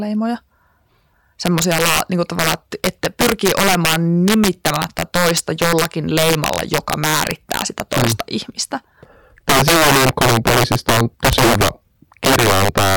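Integer overflow runs through the whole speech clip: the signal is driven about 8 dB past full scale, and instead of being limited, peaks wrap around to the opposite sign. Roughly three percent of samples flip this way, producing harsh, violent cracks on louder syllables, far sharper than clipping.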